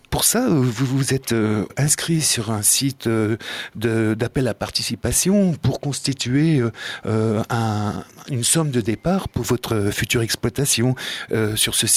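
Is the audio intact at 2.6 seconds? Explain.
No. Gain pumping runs through the whole clip, including 2.6 seconds. The gain swings by about 5 dB, pulling loud and soft parts closer in level so the sound is squashed. The likely cause is gain set too high, with a fast limiter clamping every peak.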